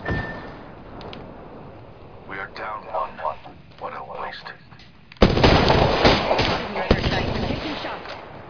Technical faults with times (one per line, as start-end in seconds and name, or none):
none